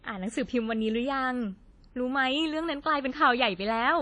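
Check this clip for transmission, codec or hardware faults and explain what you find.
One fault runs through the whole speech clip: WMA compression. The damage is plainly audible from start to finish. The likely cause is a transform codec working with long blocks at a low bitrate, which fits roughly 32 kbps in an early WMA encoder. Quantisation noise smears across tens of milliseconds around each syllable, so the speech sounds ringing and washy, with a hiss that swells and fades with the voice. On a spectrogram, nothing appears above 10.1 kHz, weak partials drop out as gaps, and blurred noise haloes surround each onset.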